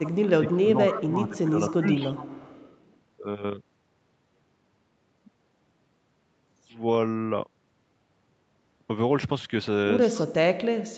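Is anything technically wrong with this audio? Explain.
Yes. This speech has echo leak and speech suppressed in double talk, both early on and the latter again near the end.

Echo leak appears from 0.03 to 0.56 s, 0.91 to 1.01 s, and 1.37 to 2.96 s: a faint copy of the speech trailing it by 261 ms, about 20 dB down, rising to about 10 dB down in the brief middle burst. The likely cause is a loudspeaker echo the far end's canceller failed to remove. On a spectrogram the harmonic pattern reappears shifted a quarter second later, faintly.

Speech suppressed in double talk runs from 0.27 to 1.98 s, with about a second of it affected and dips of roughly 15 dB, then again from 10.23 to 10.82 s, where the level collapses by about 40 dB for around half a second. The likely cause is the echo canceller clamping down while both sides spoke. The waveform shows the envelope sagging, then nearly vanishing in the late stretch, as the spectrogram goes almost blank.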